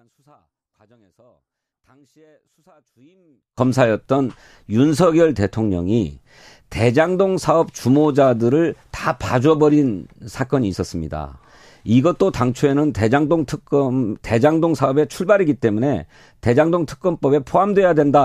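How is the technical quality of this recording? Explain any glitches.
The recording has one clear fault, confined to its opening seconds. From 0.0 to 3.58 s the speech nearly disappears, dropping by about 37 dB before returning to normal level. The likely cause is one channel inverted: with one stereo side in reversed polarity, the centred speech cancels when the channels are summed to mono, leaving only a faint residue. On a waveform this section looks almost flat; on a spectrogram it shows as a dim band.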